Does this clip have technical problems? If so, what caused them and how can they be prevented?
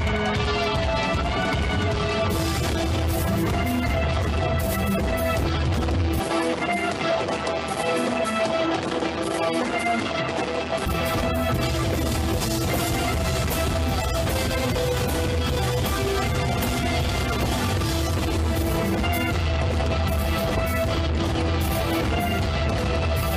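Yes. From 6.20 s to 10.86 s the sound turns duller with no gap and no jump in level, then clears again; the likely cause is an input switched to a poorer device mid-recording, whose narrower band cuts everything above 11.4 kHz and adds its own faint noise floor roughly 45 dB below the signal. On a spectrogram the energy above 11.4 kHz ends abruptly at 6.20 s and returns at 10.86 s, while the waveform shows no visible step. Locking the recording to a fixed input device and disabling automatic switching would prevent this.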